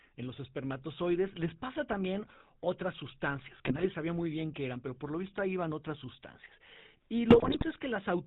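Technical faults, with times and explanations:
Throughout: GSM full-rate codec. The speech has the plainly audible buzzy, gravelly roughness of this early mobile codec, running at 13 kbps. It models the vocal tract as a filter and drives it with a sparse, evenly spaced pulse train that keeps only a third of the excitation samples, so voicing turns grainy and rasping. Nothing above 4 kHz survives. Unlike the bursts below, this texture is steady.
3.65–3.87 s and 7.30–7.65 s: GSM bit errors. After "pasa también otras sustancias" and before "sabía muy bien qué", and again near the end, the sound breaks into squawks, pops and gargling. Corrupted bits, at an error rate of about 2.4% and 2.6%, garble the decoder's filter, pitch and gain values, so frames come out with a warped spectrum or a sudden jump in level. These are brief bursts rather than the constant codec roughness, and the second one is longer.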